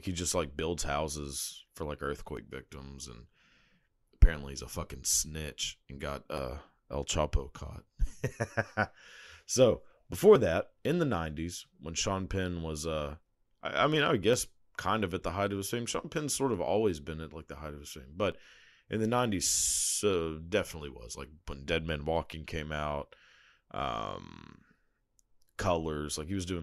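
Speech with tiny clicks or skips at 2.37, 6.38, 10.36, 14.34, 18.32 and 22.33 s. Overlap between 4-second stream segments makes the player trim real audio, so the waveform jumps.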